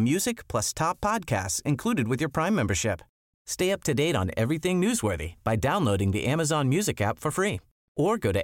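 No technical faults turn up anywhere in this speech recording. There are no events to place on a timeline.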